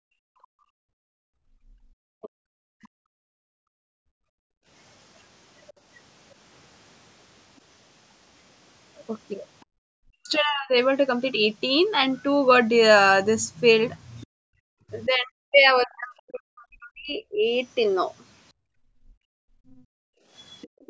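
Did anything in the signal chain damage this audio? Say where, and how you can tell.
Yes. The call's echo canceller gated the background, clamping the microphone so room sound drops by up to about 40 dB from 0.0 to 4.68 s, 9.66 to 9.78 s and 18.53 to 20.8 s.

Speech is suppressed in double talk: the canceller likely mistook the talker for echo, so speech sinks by roughly 40 dB at 2.21–2.84 s, 10.06–10.73 s and 14.25–17.46 s.

The other side's voice leaks through as incompletely cancelled loudspeaker echo, likely residual, roughly 30 dB under the speech at 5.67–9.65 s and 14.21–14.26 s, and about 25 dB under at 19.71–20.89 s.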